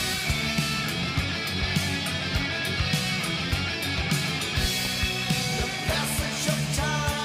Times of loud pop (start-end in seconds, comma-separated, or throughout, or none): 4.64-4.88